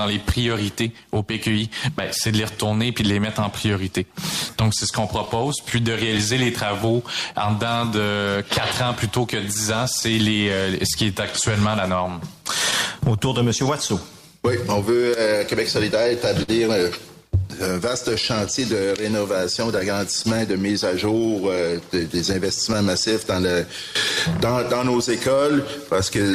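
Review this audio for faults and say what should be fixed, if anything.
Clock drift between sender and receiver runs through the whole clip. The sender's clock runs about 4% slow, so the receiver's buffer keeps draining, unlike a fixed offset that would stay constant.

Repeated timing corrections run from 0.25 s to 26.31 s at 97% speed, stretching the sound by about a second. The uneven, one-direction hiccups separate them from random loss.

Scattered short gaps fall at 5.25–7.36 s (about seven), 9.54–10.03 s (about three), 12.71–20.26 s (about ten, longest roughly 50 ms), and 22.33–25.93 s (about five). Each is a brief smeared continuation rather than silence.

Prevention: lock both ends to a shared clock with adaptive resampling, and give the jitter buffer enough headroom to absorb late packets.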